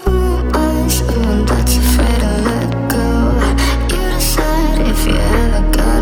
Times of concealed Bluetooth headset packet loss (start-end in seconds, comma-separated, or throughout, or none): none